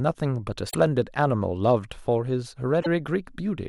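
A short glitch breaks through at 0.67 to 0.75 s and again at 2.78 to 2.87 s, each lasting about 80 ms. Both are damaged data in a compressed stream: corrupted bytes leave the decoder misreading frames and losing sync until it finds the next valid frame header.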